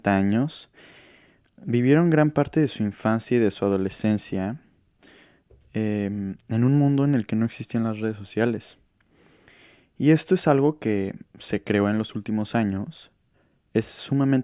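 No technical faults can be heard anywhere in the speech.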